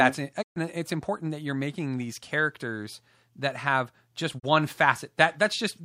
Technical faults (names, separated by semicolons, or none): digital broadcast dropout